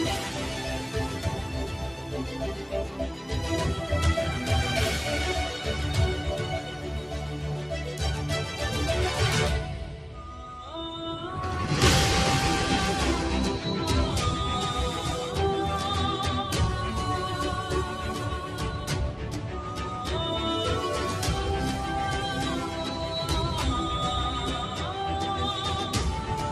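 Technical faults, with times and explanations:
Throughout: noise suppressor applied to music or sounds. A suppressor tuned for speech stays active on this material. It treats sustained tones, ambience and reverberant tails as noise and pulls them down, while sharper onsets pass largely intact. Its gain keeps shifting by roughly 5 dB as it reclassifies the content moment to moment, so the level pumps and flutters instead of holding steady. Held sounds and decays come out thinner and drier than they should.
1.72–2.13 s, 6.66–7.71 s, 9.73–10.23 s, 19.2–19.51 s: sound cut by the noise suppressor. At these points the suppressor misreads the sound itself as noise and attenuates it more heavily than its surroundings, by about 4 dB, and by about 5 dB at 9.73 s. Each dip lasts only a fraction of a second, except the one starting at 6.66 s, which runs about a second. Steady or fading parts sink and their tails are shortened, while any abrupt attacks in these spans come through mostly unharmed.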